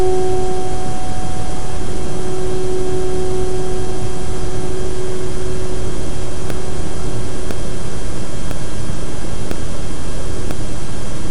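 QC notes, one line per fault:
6.50 to 10.51 s, periodic USB or driver dropouts: about five short ticks, one every 1.0 s, where roughly a millisecond of audio is replaced by silence. Something in the system is blocking the USB bus or the audio driver on a fixed schedule, so the stream briefly starves and the gap is filled with silence. The abrupt cut and resumption of the waveform is heard as a click, which is audible only while sound is playing.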